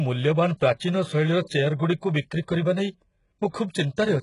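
A short speech recording carries HE-AAC compression damage throughout, heavy enough to point to a very low bitrate of around 12 kbps. The sibilants come out gritty and lispy with a metallic edge, the likely result of spectral band replication rebuilding the treble from copied lower bands instead of coding it. On a spectrogram the upper region shows repeated, blocky patches with harmonics misaligned at the crossover, and everything stops abruptly near 11.1 kHz.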